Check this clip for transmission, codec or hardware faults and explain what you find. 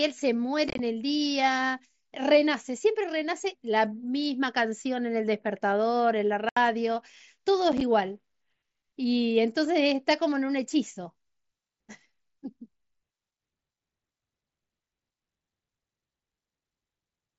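Unconcealed Bluetooth headset packet loss shows up three times in this speech, carried over an mSBC wideband link whose audio reaches up to 8 kHz. Packets between headset and phone went missing, and nothing filled them, so silence or an idle pattern sat in their place. From 0.69 to 0.79 s about 68 ms drops out in scattered bits, the longest run 22.5 ms, giving a brief crackle. From 6.49 to 6.57 s 75 ms of lost packets cut the speech off abruptly. From 7.72 to 7.81 s three short gaps totalling 22.5 ms break the speech, the longest 7.5 ms, consistent with 7.5 ms packets.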